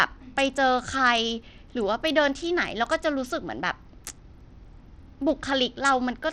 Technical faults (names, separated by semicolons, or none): Bluetooth SBC compression